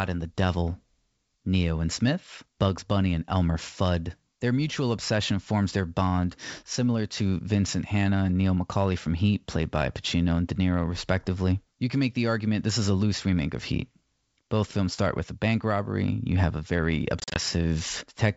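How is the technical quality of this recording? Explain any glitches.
The recording is speech carried over G.722 wideband telephone coding, at what sounds like 64 kbit/s, and it has one glitch near the end.

Packet loss on an ADPCM call occurs from 17.20 to 17.40 s, right after "have a very". About 100 ms of audio drops out across roughly 160 ms, in gaps no longer than 40 ms each, which suggests around five lost packets. Each gap is filled with hard-edged silence. Because the decoder's adaptive predictor and step size lose track of the sender's, the speech comes back distorted until they realign.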